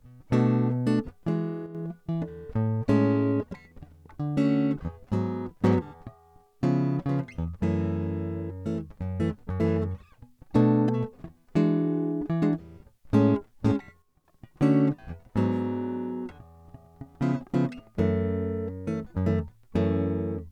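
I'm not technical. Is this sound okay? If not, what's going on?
No. The music briefly drops in volume twice, from 1.66 to 1.75 s and from 14.02 to 14.25 s. It sounds quieter, then returns. The likely cause is one channel drops out: one side of the stereo signal briefly went missing.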